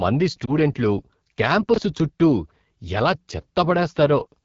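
Throughout the speech, the AMR wideband (HD Voice) codec damage is plainly audible. The voice has a rough, raspy edge, which fits one of the lowest AMR-WB rates, around 8.85 kbit/s. The codec models speech up to 6.4 kHz and fills the band above that with shaped noise. On a spectrogram, the harmonics stop near 6.4 kHz and a smeared, textureless band sits up to 7 kHz. Harmonic detail below looks blurred.

From 0.45 to 0.52 s, a lost AMR speech frame causes a brief dip or warble, consistent with a single 20 ms frame failing over the radio link. The decoder repeats the last good pitch and vocal tract settings at falling gain, then recovers weakly. The waveform shows a short sag in amplitude rather than a gap. On the spectrogram, the harmonics go briefly flat and smeared before fading back in.

From 1.74 to 1.78 s, chunks out of order produce a jumbled moment. A 20 ms piece of audio plays one chunk late, swapped with the chunk that should follow it. 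Nothing is missing, but the sequence is wrong, leaving three hard joins. The waveform shows abrupt discontinuities at each join. The spectrogram shows thin vertical broadband lines and harmonic tracks that jump out of line.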